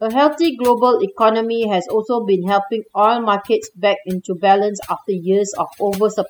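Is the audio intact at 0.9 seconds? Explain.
No. At 0.9 seconds the speech is affected by overdone noise removal, which runs through the whole clip. A noise reduction stage was pushed too hard. It pulls individual frequency bands down or shuts them off whenever they sit close to its noise estimate. Quiet parts of the voice get caught and removed with the noise. The background drops and breaks up into small twinkling, warbling specks.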